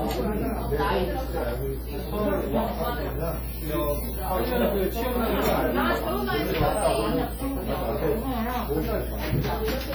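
Throughout the clip the sound carries heavy transform-codec damage, most likely WMA compression at a low bitrate, which fits something around 32 kbps. Quantisation noise is smeared over tens of milliseconds, so transients ring and sustained parts turn washy, with a hiss that swells and fades with the signal. On a spectrogram, weak components show as patchy, blocky gaps where they were zeroed. Energy still reaches about 20.1 kHz, so the top end is not cut.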